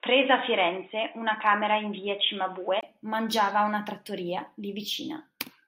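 From the start until 2.83 s the speech is dull and boxy, with nothing above 3.8 kHz, a level roughly 5 dB different and a faint background hiss well below the voice. A 20 ms silence then breaks the audio and full clarity returns just before "mangiava a una trattoria". The likely cause is an input switched to a poorer device. Unlike a codec bandwidth drop, the tone, level and noise floor all change together at a clean break.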